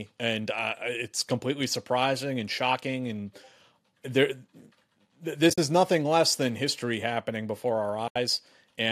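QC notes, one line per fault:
5.50–5.58 s and 8.08–8.16 s, AAC frame loss with muting: the decoder zeroed the missing frames, leaving soft-edged holes. The first spans about 80 ms, with roughly 60 ms missing in patches and the longest gap near 50 ms, just before "is nothing less than". The second is a solid 80 ms right after "than history happening before". On a spectrogram each appears as a blank vertical band across all frequencies. On a waveform the envelope tapers smoothly to silence rather than cutting off sharply.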